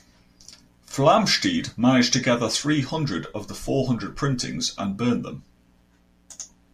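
A steady, raspy buzz sits under the speech from start to finish, faint and roughly 40 dB below the talker, most audible in the pauses. It is mains buzz at 60 Hz: sharp switching spikes from a dimmer, a rectifier or an unshielded cable couple into the signal path twice in every mains cycle, and those spikes carry a dense series of 60 Hz harmonics up into the kilohertz range, which gives the hum its edge.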